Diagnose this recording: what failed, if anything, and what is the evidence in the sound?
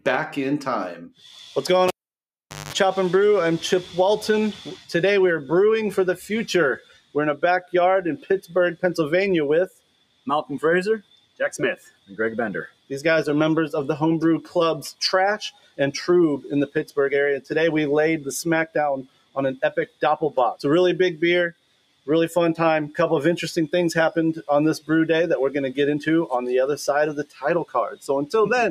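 The failure is in call processing: a noise suppressor built for speech stayed engaged on this sound. Across the clip the level swings by around 15 dB as sustained content and decays are treated as noise and pulled down while attacks pass, giving pumping, fluttering or thinning.

Sound cut by the noise suppressor appears at 6.8–8.53, 9.68–10.27, 11.01–12.91, 14.42–15.79, 16.68–17.51, 18.67–20.02, 21.52–22.08 and 27.24–28.07 s. Within each span, steady or fading material sinks by about 18 to 21 dB for roughly a third of a second to a second, as the suppressor clamps its gain on it.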